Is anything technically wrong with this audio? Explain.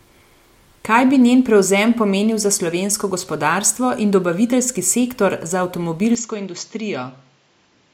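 Yes. An input switched to a poorer device at 6.15 s, right after "in dobaviteljski sektor za," and lasting to the end. The recording likely changed to a narrower microphone path, so nothing remains above 7.6 kHz, the level falls by around 5 dB with no gap, and new background noise appears roughly 40 dB down.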